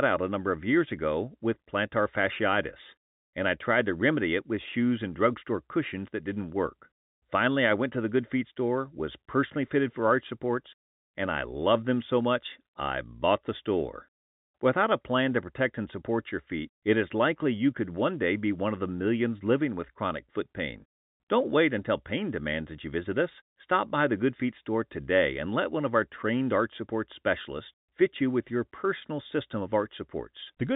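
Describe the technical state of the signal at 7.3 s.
At 7.3 s the audio is intact, carrying only the narrow G.711 telephone band, with nothing above about 3.8 kHz.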